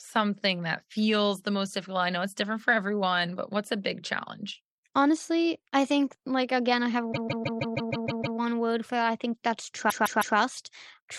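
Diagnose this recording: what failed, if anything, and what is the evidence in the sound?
Repeated frames at the codec or storage stage. After "like again I have", a 156.7 ms block replays eight extra times from 7.12 to 8.37 s. After "that I think that's", it replays three more times from 9.89 to 10.36 s. Each repeat is identical, which fits a run of six compressed frames. That sets it apart from a buffer underrun, which leaves gaps instead of lengthening the audio with duplicates.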